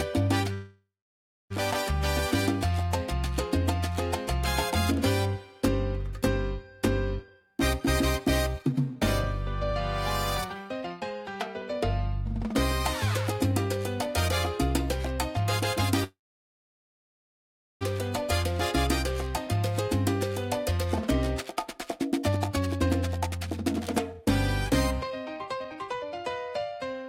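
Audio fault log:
0.53–1.52 s and 16.04–17.83 s, call audio freeze: the sound halts and its last moment is stretched into a buzz that fades to silence, about 0.63 s of silence in the first 0.97 s gap and about 1.65 s in the 1.77 s gap. The likely cause is delayed packets emptying the jitter buffer. Playback then resumes exactly where it stopped, so nothing is lost; the rest of the audio is simply pushed later. That is what separates this from a dropout, which cuts material out.
7.20–9.71 s, 10.49–14.07 s and 20.71–27.03 s, jitter buffer speed-up: the audio plays about 121%, 111% and 126% fast, losing roughly half a second, roughly 0.4 s and roughly 1.5 s of material. The receiver is trimming a backlog in its buffer by repeatedly cutting out tiny pitch-period slices. The result sounds hurried while the pitch stays put, which distinguishes it from a plain playback-rate increase, where everything would also rise in pitch.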